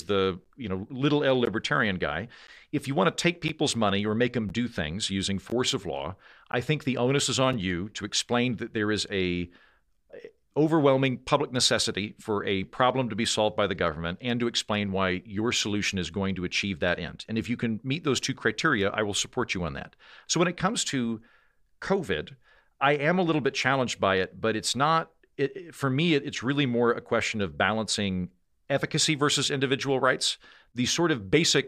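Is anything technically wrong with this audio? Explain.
Yes. Gap between stream segments at 0.44, 1.45, 2.47, 3.48, 4.49, 5.50, 6.52 and 7.53 s: timestamps of 1-second segments leave 6 to 17 ms holes. The player fills them with silence, so the speech drops out sharply once per second without losing any audio.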